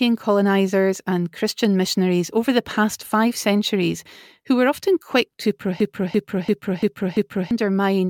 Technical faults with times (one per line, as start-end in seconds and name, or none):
5.80-7.51 system hang loop